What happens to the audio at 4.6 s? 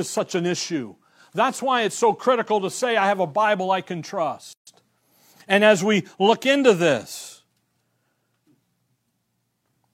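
A gap at a join of encoded pieces: after "I can", a 139 ms silence from 4.53 to 4.67 s, encoder delay and padding left untrimmed. Unlike a dropout, the speech resumes exactly where it stopped.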